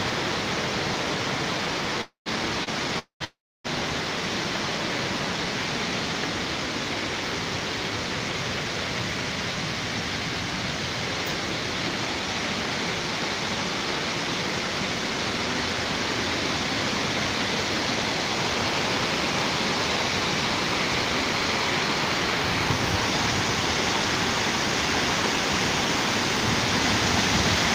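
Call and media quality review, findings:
Call audio freeze at 2.01–2.28 s, 2.99–3.22 s and 3.24–3.66 s. The last sound is extended as a fading buzz into silence (about 120, 110 and 300 ms of it), then the sound resumes where it stopped, adding roughly 240, 220 and 400 ms of delay with nothing lost. The likely cause is delayed packets draining the jitter buffer. On a spectrogram: smeared, decaying bands, then blank columns. On the waveform: a tapering envelope into flatline.

Short stall from a late packet at 2.64–2.69 s. The jitter buffer ran dry, so the receiver stretched the current sound by about 29 ms with a slight buzz or dip, then continued in place with no loss. Spectrogram shows a brief horizontally smeared slice. Waveform shows a slightly elongated, repetitive stretch.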